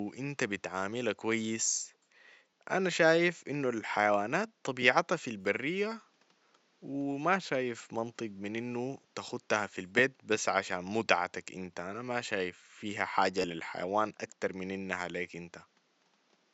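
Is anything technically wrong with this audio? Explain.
Yes, there are three repeated-buffer stutters. At 2.51 to 2.53 s, right after "إنت بتعاملها كويس", the same 10.67 ms slice plays twice more. At 5.41 to 5.45 s, after "إنو الحيوانات طبيعتها في", it plays four more times. At 13.42 to 13.44 s, just before "للحيوان أكتر من إنها", it plays twice more. Each time, fresh audio didn't arrive in time, so the device replayed its last chunk, which fits a 512-sample buffer. Because the chunks are so short, each hard-joined repeat comes across as a quick click or tiny buzz rather than an obvious echo. The 5.41 s one is the longest, with around 40 ms of real audio missing. The other two each drop about 20 ms. There's also some room noise sitting roughly 41 dB below the speech.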